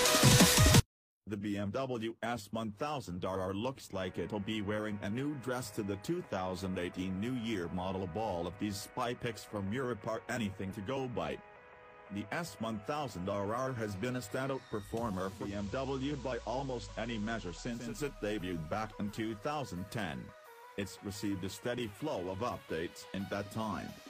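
Digital radio blending to analogue runs from 15.27 to 18.02 s. The digital stream dropped and the receiver cross-faded over 335 ms to the FM broadcast, so level falls about 2 dB, and hiss about 25 dB below the signal appears until it blends back.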